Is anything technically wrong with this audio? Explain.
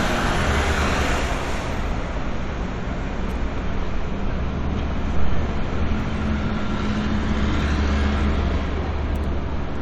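No, the signal holds steady throughout, with no audible technical faults anywhere in the recording.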